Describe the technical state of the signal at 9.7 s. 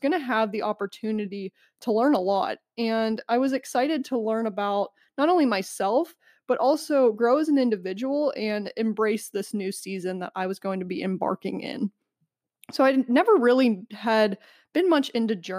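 At 9.7 s the speech signal is intact, with no technical fault audible at that moment.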